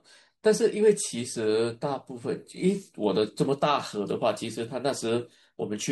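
At 3.89 s the speech carries a single sharp click, a brief tick that would show as a thin vertical line running up the whole spectrum. This is the sound of dropped samples, and the likely cause is that roughly one sample went missing from the stream. With that point gone, the waveform jumps straight from one value to a later one. The resulting step is far too short to remove any audible sound, but it produces that click.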